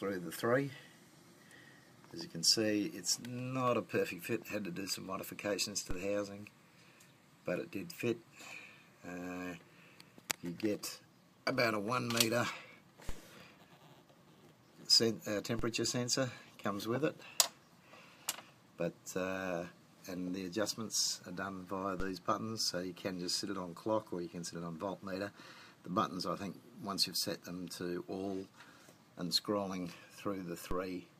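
DC steps at 5.91, 13.09, 15.59, 22.00 and 30.71 s shift the waveform's zero line by about −28 to −30 dBFS, each heard as a low thump, with the offset then decaying through a 5 Hz high-pass.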